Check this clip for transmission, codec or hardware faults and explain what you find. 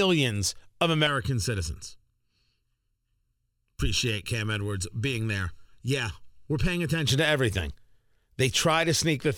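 One fault is present: channel delay (comb filtering), from 1.07 s to 7.07 s, ending just before "to everything". One channel runs late by under a millisecond and is summed to mono, cancelling shared content at evenly spaced frequencies from roughly 700 Hz upward, so the speech sounds hollow and phasey.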